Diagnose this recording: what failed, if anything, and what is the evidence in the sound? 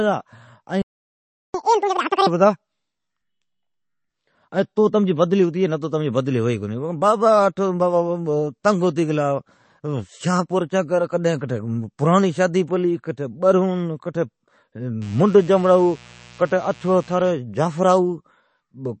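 Codec stage: the whole clip carries plainly audible watery, swirling artefacts, and nothing exists above 8.3 kHz. On a spectrogram, the top is cut flat and weak components flicker on and off between frames. This is likely MP3 encoding at a low bitrate, which fits 32 kbps.

Playback stage: a playback stall silences the audio from 0.82 to 1.54 s, about 0.72 s. The waveform shows a flat gap and the spectrogram a blank vertical band. The sound then resumes where it stopped, likely because the player's buffer ran dry or its thread was blocked.

Playback stage, continued: from 1.54 to 2.27 s the backlog is played as a catch-up at higher speed, twice normal. Pitch rises by about ten semitones. On a spectrogram, harmonics sit higher and spacing widens, and waveform events are compressed in time until normal speed returns.

Codec stage: pre-echo appears at 4.76 s as a short hiss, about 10 ms long, ahead of a sharp attack. 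The waveform shows low-level noise just before the onset, and the spectrogram a broadband smear leading the transient. Quantisation noise spread across the block filled the quiet part.

Analogue wiring: mains buzz runs from 15.01 to 17.32 s, built on 60 Hz at about 25 dB below the signal. A spectrogram shows a comb of evenly spaced horizontal lines at 60 Hz multiples, from switching spikes entering through a dimmer, rectifier or unshielded cable.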